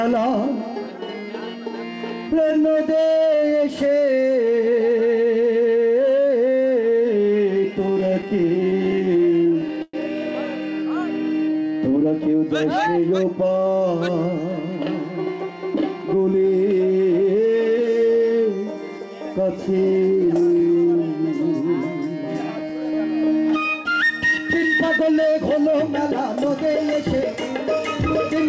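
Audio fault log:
7.80–9.95 s, repeated stalls (stutter): the buffer ran dry 29 times, each gap filled by stretching the last sound (longest 112 ms), so nothing is lost, unlike dropouts.
11.97–13.56 s, jitter buffer speed-up: roughly 150 ms of pitch periods trimmed, so the sound runs about 7% fast at unchanged pitch, hurried rather than chipmunk-like.
19.99–20.60 s, jitter buffer slow-down: 48 ms of repeated pitch periods added, running about 7% slow at the same pitch, drawn out without the gaps of stalling.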